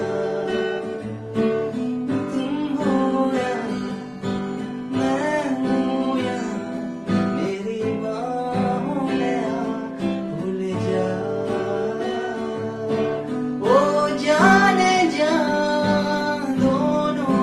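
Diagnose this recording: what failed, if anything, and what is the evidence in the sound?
Nothing failed: the sound shows only what a working Opus call path leaves, with the top end stopping near 12 kHz, and no stage gives evidence of a fault.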